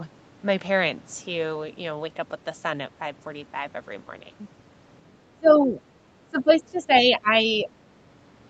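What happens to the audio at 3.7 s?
Nothing goes wrong at 3.7 s: the speech there passes intact through the call's microphone processing and Opus call path, with no dropout, glitch or distortion at that moment.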